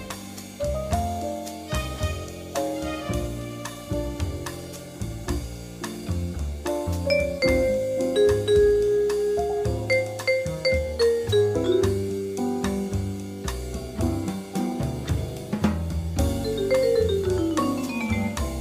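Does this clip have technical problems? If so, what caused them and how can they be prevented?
No, this clip has no technical problems, so there is nothing to trace to a cause or prevent.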